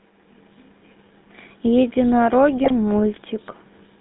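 Throughout, the speech has passed through a GSM full-rate codec, a pulse-excited vocal-tract model consistent with a 13 kbps stream, limited to 150 Hz–3.7 kHz, giving a plainly buzzy, gravelly roughness. From 2.64 to 2.73 s, GSM bit errors corrupt the decoder's filter, pitch and gain values, in line with about three damaged frames, so the speech breaks into a brief squawking, gargling burst.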